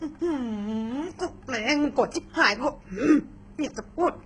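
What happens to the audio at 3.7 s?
At 3.7 s the speech is likely passing through HE-AAC compression at a very low bitrate, around 12 kbps, as it is for the whole clip. The treble is rebuilt by copying lower bands upward, so s sounds turn gritty and metallic, with nothing above 10.9 kHz.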